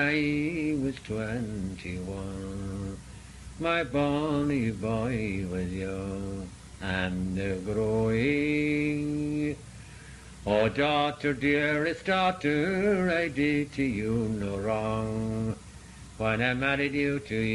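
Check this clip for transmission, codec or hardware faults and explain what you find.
No transmission, codec or hardware faults can be heard anywhere in the audio, which stays continuous and stable throughout.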